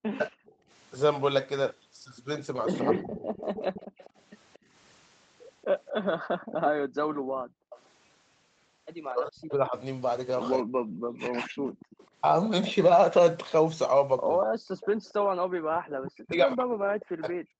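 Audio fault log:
0.0–3.3 s and 9.1–17.5 s, speech suppressed in double talk: the speech repeatedly dips, thins and breaks into pieces, by as much as about 40 dB. This totals roughly half a second early on and about three seconds later. The likely cause is an echo canceller clamping down while both ends talk at once.
0.24–17.6 s, echo leak: a faint copy of the speech trails the original by about 236 ms, around 15 dB below it. It likely comes from a loudspeaker at the far end whose echo canceller did not fully strip its microphone pickup before sending it back.
0.52–0.69 s, 3.87–7.7 s and 15.5–15.71 s, background gated by the echo canceller: the room sound drops away and then returns. The first dip is about 18 dB, the later two about 40 dB, and they last roughly 150 ms, 500 ms and 200 ms in total. The canceller is muting the microphone hard while playback runs.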